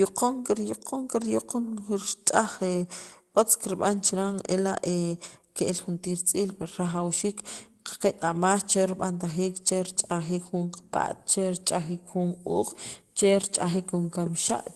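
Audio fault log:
Nothing stood out on listening to this speech clip, which came through its call path as expected.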